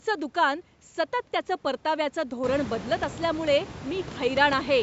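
No technical faults can be heard in this speech recording, which carries the ordinary shaping of call microphone processing that takes out the lowest bass, while the room noise behind it rises by about 21 dB around two and a half seconds in and still stays about 15 dB below the speech.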